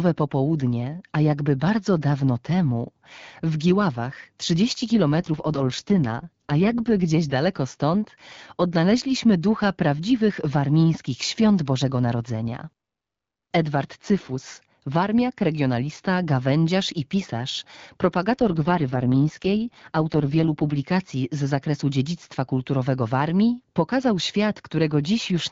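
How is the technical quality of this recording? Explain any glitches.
The speech is wideband phone audio whose clarity suggests AMR-WB (HD Voice) at around 12.65 kbit/s, with twice-degraded stretches. From 5.20 to 7.36 s and again from 18.35 to 20.87 s the speech turns rough, buzzy and synthetic without any gap or loss of bandwidth. This is an AMR rate drop: a weak radio link likely pushed the codec down to about 6.6 kbit/s to protect bits, before it recovered.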